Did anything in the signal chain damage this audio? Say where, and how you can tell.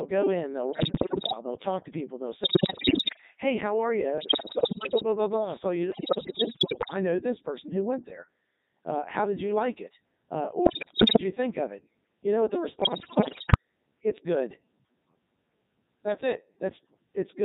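Yes. At the codec stage, a Codec 2 vocoder at 3.2 kbit/s runs throughout, leaving the speech buzzy and robotic because it is resynthesised from pitch and envelope parameters.

On the radio link, bit errors on digital voice radio cause pitch jumps, warbles and bleeps at 0.72–1.34, 2.44–3.21, 4.18–5.03, 5.92–6.94, 10.66–11.23 and 12.82–13.57 s, as corrupted frame parameters reach the decoder.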